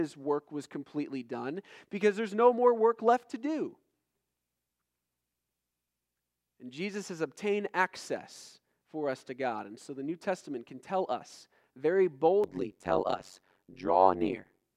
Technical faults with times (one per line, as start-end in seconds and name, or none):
12.44-14.65 overlap-add ripple